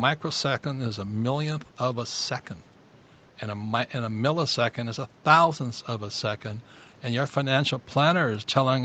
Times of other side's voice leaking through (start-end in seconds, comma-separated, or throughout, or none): none